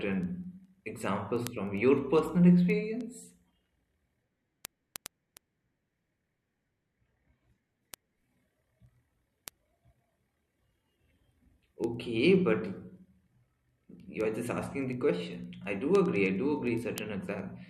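A speech clip with sharp ticks of uneven strength at a steady rate of roughly ten per second, from 0.13 s to 17.6 s. These are word clock ticks: the receiving device runs on its own clock, about 200 ppm off the sender's, so each time the clocks slip a single sample is dropped or repeated.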